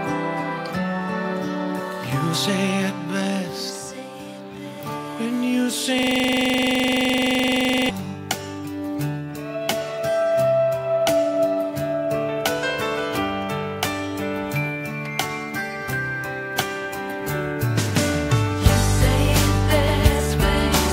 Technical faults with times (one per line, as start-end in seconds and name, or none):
5.99-7.89 system hang loop